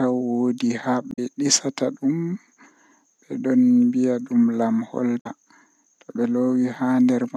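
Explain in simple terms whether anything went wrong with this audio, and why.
Something did go wrong, twice. The speech is briefly broken from 1.09 to 1.19 s and again from 5.17 to 5.27 s. Each break lasts about a tenth of a second and sounds like a short chirp, squawk, click or gap. Both come from damaged data in a compressed stream. A small piece of the stored file was wrong. The player could not read it properly, lost its place for a moment, and then picked up again at the next readable chunk.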